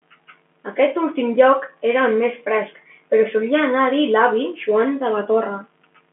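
No technical faults occur at any point in this speech clip.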